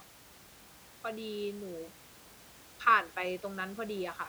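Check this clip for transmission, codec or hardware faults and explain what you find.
No transmission, codec or hardware faults.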